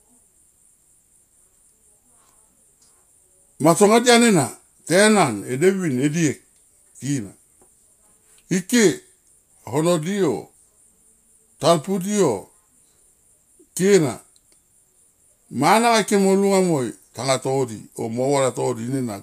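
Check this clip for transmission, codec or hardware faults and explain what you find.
No faults found.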